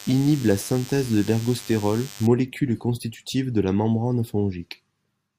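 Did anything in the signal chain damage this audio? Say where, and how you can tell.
Yes. Analogue stage: a DECT cordless phone buzz sits under the speech from 0.0 to 2.27 s, ending just before "constitutive de la membrane". It is a thin 100 Hz buzz rich in harmonics, roughly 20 dB below the speech. A nearby DECT transmitter's 10 ms radio bursts were rectified in the audio wiring.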